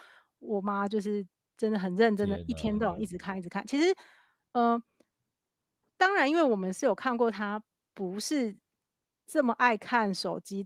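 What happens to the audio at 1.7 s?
Nothing goes wrong at 1.7 s: the speech carries straight through intact, with only the light coloring its Opus voice compression gives throughout.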